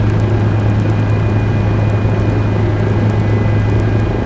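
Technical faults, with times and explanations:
Throughout, resampler restarted on every block: the 44.1 kHz to 16 kHz conversion ran fresh on each 100 ms block, missing neighbouring samples at the edges, so faint ticks recur at exactly 10 Hz, only while signal is present, with no gaps or dropped audio, unlike buffer underruns.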